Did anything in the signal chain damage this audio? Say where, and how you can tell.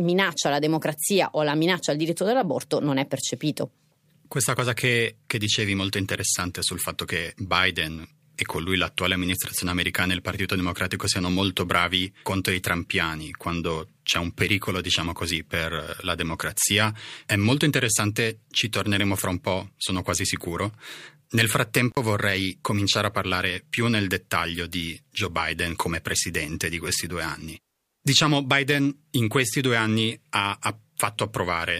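Yes. The damage is in the analogue wiring. There is an intermittent contact at 21.91 to 21.97 s, just before "vorrei cominciare a parlare". The speech drops out abruptly, with crackle at both edges. For about 48 ms the line is open and faint hiss remains. Then the signal snaps back. A loose cable or plug is briefly breaking the connection, and the rough make-and-break of the contact causes the crackle.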